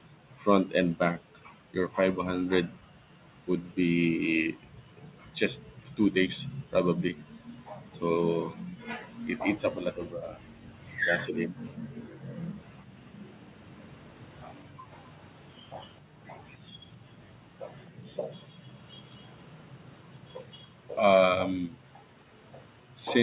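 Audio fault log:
0.09–12.91 s, 14.68–18.75 s and 20.65–22.96 s: background gated by the echo canceller. Room sound dips by up to about 40 dB in brief stretches, then returns.
15.19–15.97 s: echo leak. A very faint copy of the speech trails about 0.26 s behind it, likely residual loudspeaker pickup the canceller missed. This is a delayed repeat rather than a level dip.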